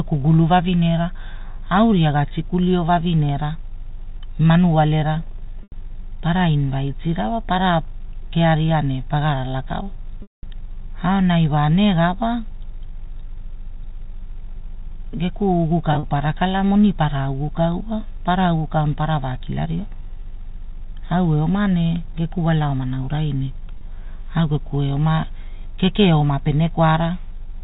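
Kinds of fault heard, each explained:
Packet loss with pitch repetition: the speech briefly freezes into a held, buzzy tone four times. The shortest is near 23.78 s. The longest comes at 10.22 s just after "kearia ne pagarala kala", where the 210 ms gap fades toward silence before speech cross-fades back. Audio packets went missing, and the receiver bridged each gap by repeating the last pitch period and fading it out, on a narrowband G.711 telephone link.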